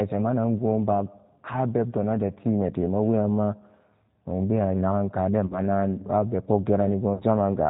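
From start to finish the speech carries the G.729 codec's sound: nothing above 4 kHz, and a rough, slightly synthetic texture that fits G.729A at 8 kbit/s. Unlike simple low-pass filtering, the voice itself is rebuilt from a pitch and filter model. The result is grainy, not merely dull.

After "nogbewa nagan kade", from 5.46 to 5.60 s, VoIP packet loss concealed by the speech codec appears. About 40 ms of audio is missing, which fits two lost packets. The decoder stretches the last sound into a fading buzzy tone or coloured noise rather than leaving silence or a click. The voice stays weak briefly afterward. A second concealment at 7.14 to 7.24 s covers about 60 ms, consistent with three packets.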